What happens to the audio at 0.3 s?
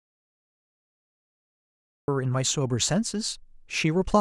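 At 0.3 s the speech is in an audio dropout to silence that runs from the very start to 2.08 s, likely lost input written as silence: a flat waveform and a blank spectrogram.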